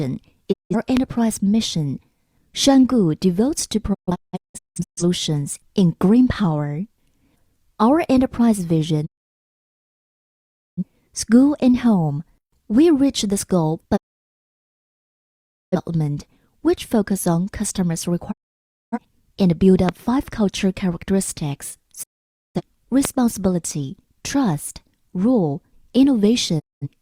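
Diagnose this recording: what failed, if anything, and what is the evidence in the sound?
The digital broadcast dropout originates at the reception and decoding stage. The sound fades to silence over about 20 ms and stays muted at 0.51–0.75, 9.05–10.84, 13.95–15.76, 18.31–18.99, 22.02–22.61 and 26.58–26.88 s. Between 3.93 and 5.03 s it breaks into several short holes, the longest about 0.17 s. The receiver mutes whole frames that fail their check. Unlike a network packet loss with concealment, nothing is patched over, and the programme resumes later rather than continuing from where it stopped.

A loud pop appears at 0.97–0.99, 19.89–19.91 and 23.05–23.07 s, each a single sharp transient around 15 to 20 dB above the programme. It sits on top of the sound, which carries on underneath without a gap. That separates it from the dropouts, which remove audio, and from a digital splice click, which would coincide with a discontinuity. 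The likely cause is an electrical step in the analogue path, such as a switch, plug or static discharge, shaped by the circuits that follow.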